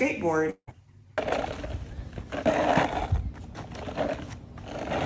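A long network dropout runs from 0.50 to 0.69 s. The gap is filled by a fading buzz or hiss, then brief silence, and the sound resumes with a part likely lost in transit, over a call path whose band stops at 8 kHz, consistent with a wideband codec such as G.722.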